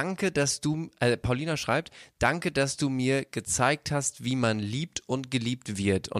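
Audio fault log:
No fault is heard in the audio.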